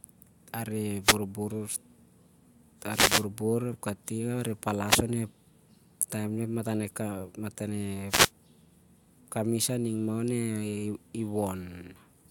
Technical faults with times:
1.02-1.18 wireless microphone noise hit
2.89-3.26 wireless microphone noise hit
4.85-5.02 wireless microphone noise hit
8.08-8.31 wireless microphone noise hit

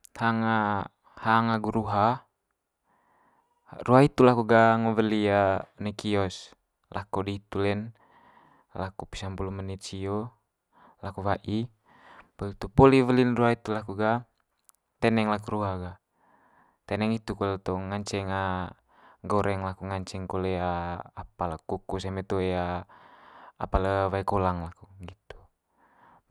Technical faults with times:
none

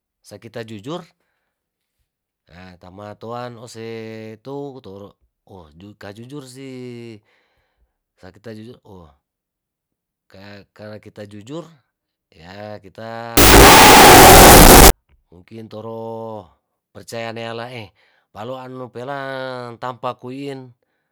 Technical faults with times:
13.37-14.90 wrong sample width

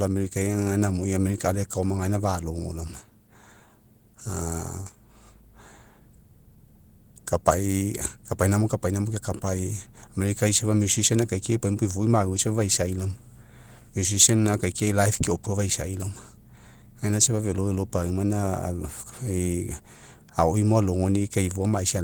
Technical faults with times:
none

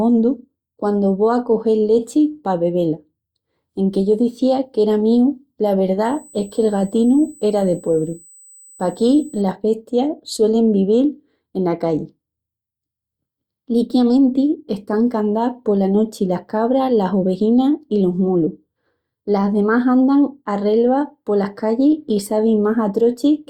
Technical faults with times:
6.04-9.42 USB whine

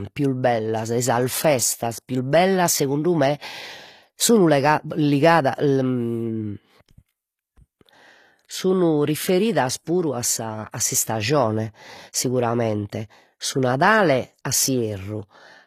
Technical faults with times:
0.00-15.67 HE-AAC compression

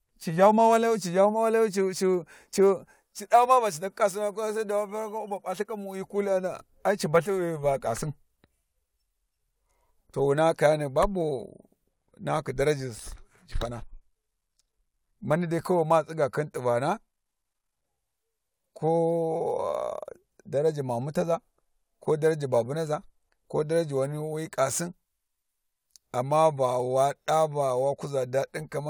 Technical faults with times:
0.00-28.90 sample clock jitter

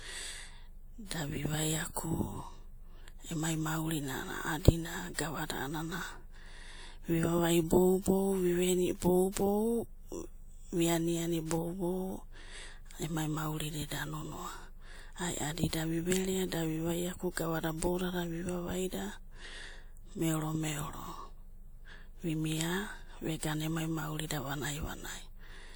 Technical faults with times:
15.68-15.73 pre-echo
17.78-17.82 pre-echo

